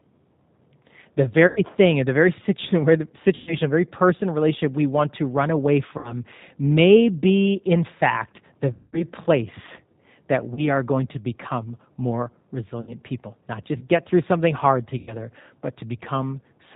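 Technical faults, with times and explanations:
Throughout: G.729 codec. The whole clip is squeezed through an 8 kbit/s VoIP codec that rebuilds speech from a vocal tract filter, a pitch predictor and a handful of pulses per frame. Nothing above 4 kHz survives, so the top end is just gone. The coding damage is plainly audible: the speech stays intelligible but sounds rough and a bit synthetic, as though it's being reassembled rather than played back.
1.47–1.61, 3.35–3.56, 5.98–6.15, 8.72–9.04, 10.54–10.68, 12.81–12.93 and 14.98–15.16 s: VoIP packet loss concealed by the speech codec. The gaps run 30 to 210 ms, the longest at 8.72 s, which fits runs of 30 ms packets going missing. The decoder fills each hole by extending its last pitch and filter while turning the level down. You hear the sound stretched into a buzzy tone or coloured noise that fades, followed by a weak, smeared recovery lasting somewhat past the gap.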